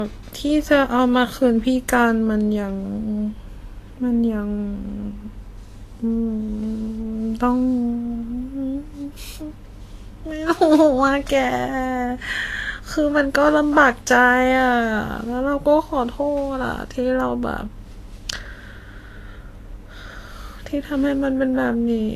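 From start to finish the speech has nothing above about 14.2 kHz, and the top end carries that thin, smeared quality you get from heavy lossy coding. The likely cause is low-bitrate audio saved at a high bitrate: the sound points to an earlier low-rate encode, something like Vorbis around 34 kbit/s, later re-saved as MP3 at about 192 kbit/s. The bigger file can't restore what the first codec stripped out.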